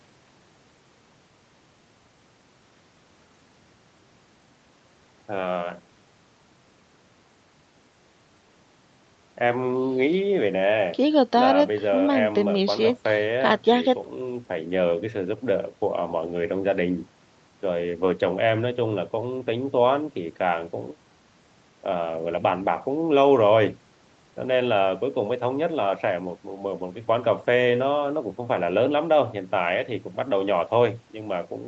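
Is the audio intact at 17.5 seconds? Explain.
Yes, the speech at 17.5 s is intact, with nothing there beyond the ordinary band limit near 8 kHz that the call path leaves on the whole recording.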